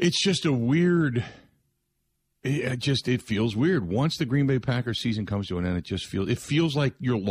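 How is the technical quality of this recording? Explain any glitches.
No glitches are audible anywhere in this recording.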